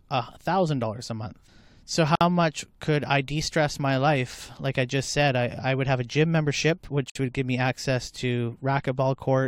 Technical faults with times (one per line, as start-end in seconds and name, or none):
2.15-2.21 gap at a join of encoded pieces
7.10-7.15 gap at a join of encoded pieces